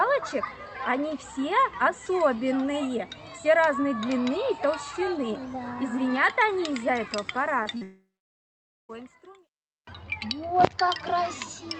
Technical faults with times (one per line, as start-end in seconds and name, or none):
7.63-7.83 short concealed packet loss
7.83-8.91 long network dropout